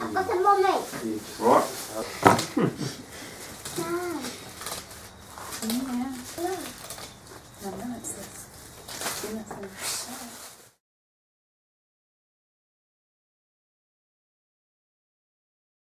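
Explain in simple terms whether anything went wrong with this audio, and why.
No faults are present in this recording, so nothing went wrong.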